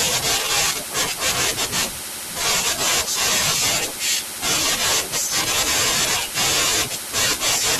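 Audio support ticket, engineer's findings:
Chunks out of order at 2.67–2.70 s and 6.00–6.03 s in the speech: a 10 ms chunk plays two chunks late, giving a brief jumble with three hard joins each time. No gap or missing audio, unlike a dropout. Probable cause: the playback buffer or writer queue committing chunks out of sequence.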